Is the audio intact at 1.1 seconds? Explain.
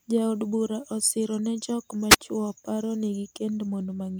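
Yes, the speech at 1.1 seconds is intact, with no audible fault at that moment.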